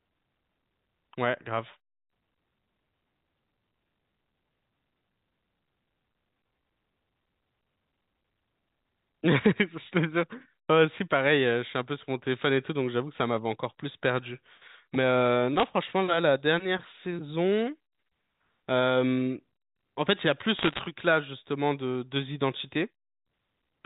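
Bit errors on a digital phone line crackle from 15.58 to 15.64 s and from 20.58 to 20.80 s. Flipped bits in single G.711 samples give sharp ticks while the speech itself continues intact, unlike dropouts.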